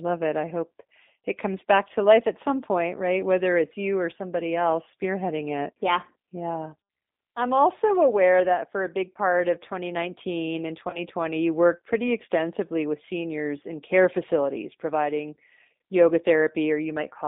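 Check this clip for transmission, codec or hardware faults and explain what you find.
Two faults are present: narrowband codec damage across the whole speech clip, and one concealed packet loss at about 10.9 s.

G.729 codec, throughout: the line passes only about 200 Hz to 3.7 kHz, and the speech has the rough, slightly synthetic grain of a coder that rebuilds each 10 ms frame from a vocal-tract filter, a pitch predictor and a few pulses, which fits an 8 kbit/s G.729A stream. Unlike plain band-limiting, the roughness sits inside the voice itself.

VoIP packet loss concealed by the speech codec, 10.90 to 11.00 s, just before "you worked pretty extensively": about 30 ms of audio went missing, which fits a single lost packet. The decoder stretched its last pitch and filter into a brief buzzy tone or coloured noise that fades. The speech stays weak or distorted for tens of milliseconds or more afterwards, because each rebuilt frame builds on the one before. 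A hard dropout would leave silence or a click instead.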